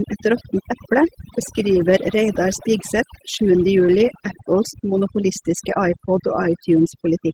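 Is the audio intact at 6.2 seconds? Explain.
No. At 6.2 seconds, like the rest of the clip, the speech has overdone noise removal. The reduction is set so hard that bands near the noise floor get switched off, leaving a lowered background that breaks up into twinkling specks. Opus voice compression also runs throughout. It sounds like hybrid mode, SILK with a CELT layer on top, reaching about 20.1 kHz, and the hoarse, slightly robotic texture fits a low rate around 16 kbps.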